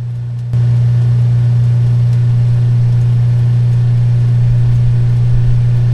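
Sudden gain jump at 0.53 s: level, background included, steps up about 9 dB and stays there to the end, likely a gain change applied without any ramp.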